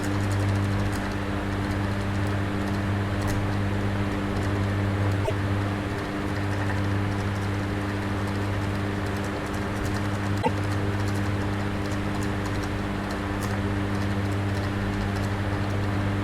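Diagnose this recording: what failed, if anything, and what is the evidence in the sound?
Damaged data in a compressed stream appears twice, from 5.21 to 5.31 s and again from 10.39 to 10.48 s, each a burst of roughly 0.1 s of corrupted decoding. The failure sits at the codec stage, in the encoded data on the storage or delivery path. Corrupted bytes there leave the decoder misreading a few frames. It loses frame sync and resumes clean output only once it locks onto the next valid frame header.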